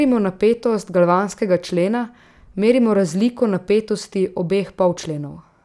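No technical faults are audible anywhere in the speech recording.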